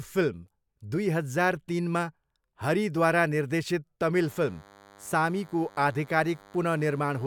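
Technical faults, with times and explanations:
4.15 to 7.26 s, DECT cordless phone buzz: a thin, steady 100 Hz buzz full of harmonics sits roughly 25 dB under the speech to the end. A nearby DECT handset or base is bursting every 10 ms, and the audio circuitry is rectifying it.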